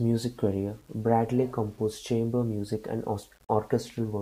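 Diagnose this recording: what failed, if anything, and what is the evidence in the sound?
Grainy distortion rides along with the speech for the whole clip, roughest on the quiet tails, and it sits only about 35 dB below the signal. That's low bit depth without dither, likely a sample-format conversion rounded down to 8 bits, so the error tracks the waveform.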